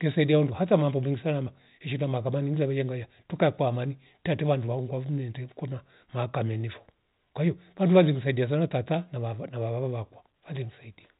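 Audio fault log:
No faults can be heard in this speech. The audio comes over a WebRTC call path with nothing above 4 kHz, a narrowband sound that fits G.711 A-law at 64 kbps.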